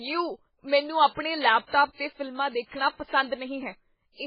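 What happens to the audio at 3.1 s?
At 3.1 s the speech sounds watery and swirly, with a dull top end and a metallic chirp on sibilants, and it sounds the same from start to end of the clip. Nothing is heard above about 5.2 kHz. The likely cause is heavy MP3 compression at a very low bitrate, consistent with around 16 kbps. Starved of bits, the encoder cuts the treble at a fixed point and drops weak frequency lines, which flicker on and off between frames.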